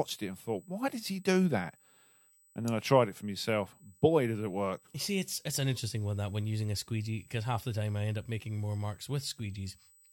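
Right from the start and running the whole way through the speech, there's USB whine: a steady, fixed-pitch tone at 8 kHz, sitting roughly 30 dB under the voice. That's the 125-microsecond microframe rate of the USB bus leaking into the audio through power or ground.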